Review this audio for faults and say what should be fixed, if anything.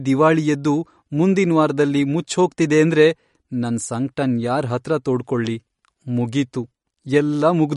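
Throughout the speech there is a watery, swirling texture, with metallic s sounds and nothing above 11.2 kHz. This is likely MP3 compression at a bitrate around 48 kbps. Weak frequency lines flicker on and off between frames, and that shimmer is what separates it from plain low-pass filtering. Prevent it by encoding at a higher bitrate or delivering a lossless file.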